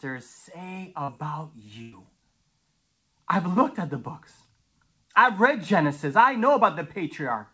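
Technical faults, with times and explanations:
1.04 to 1.10 s, short concealed packet loss: About 40 ms of the speech never reached the decoder in time. The receiver filled the hole by carrying on the sound just before it, about 39 ms of made-up audio, then blended back into the real signal. That is why this spot sounds like a brief smear or wobble. The band stops at 8 kHz, which fits a G.722 call codec.
1.82 to 1.94 s, burst of packet loss: Here about 100 ms went missing in one run, several packets' worth. The receiver kept extending the last sound for about 101 ms and turned it down as the gap went on. There is no dead silence. Instead a voiced sound turns into a held buzz, or a noisy one into a fading hiss. The speech then picks up further along, with the part in between lost.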